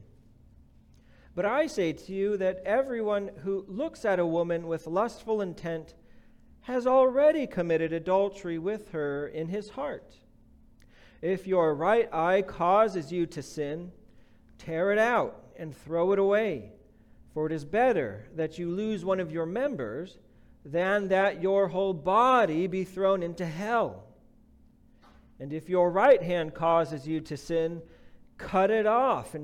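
No technical faults can be heard anywhere in the audio.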